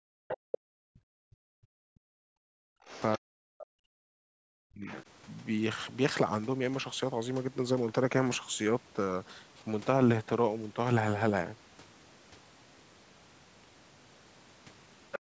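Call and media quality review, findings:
Speech suppressed in double talk, 0.00–4.86 s. Likely echo canceller unable to separate near-end talker from loudspeaker echo, attenuating both. Talker's speech dips and breaks up over roughly 4 s, deepest drop about 40 dB.

Other side's voice leaking through at 0.29–0.58 s, 2.92–3.18 s, 4.84–5.03 s and 15.12–15.19 s. Likely residual loudspeaker echo not fully cancelled. Far-end voice audible in short scraps, about 10, 20, 15 and 10 dB below the talker respectively.

Background gated by the echo canceller, 15.19–15.35 s. Canceller clamping the microphone hard while the loudspeaker plays. Room sound drops out for about 150 ms, deepest dip about 36 dB, within call-processed audio band-limited to 8 kHz.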